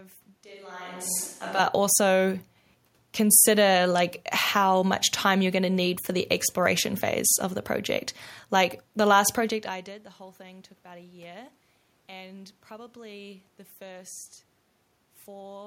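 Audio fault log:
0.44–1.59 s, switch to a distant microphone: speech abruptly turns hollow and roomy with thinner bass, level drops about 5 dB; likely the close microphone dropped out.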